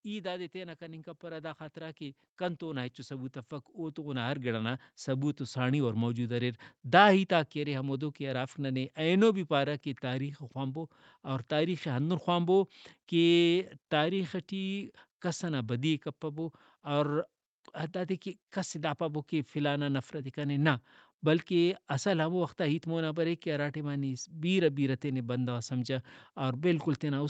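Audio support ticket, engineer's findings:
Automatic gain rising, 0.52 s to 10.94 s, starting after "ای دادے" and settling by "اور تاریخے ہندن خوانبو". Speech and background noise swell together by about 13 dB over roughly ten seconds. AGC stage judged input too quiet and ramped gain slowly, not per-syllable. Audible as a gradual noise-floor lift under the voice. Nothing above 8 kHz throughout, consistent with an Opus link near 48 kbps.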